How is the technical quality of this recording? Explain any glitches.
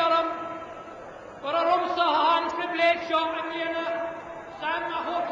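There's one glitch worth flagging. From 2.47 to 2.52 s you get a short burst of damaged data in the compressed stream: part of the data there got corrupted, so the decoder misread those frames and lost sync hunting for the next header. It comes through as a quick blip.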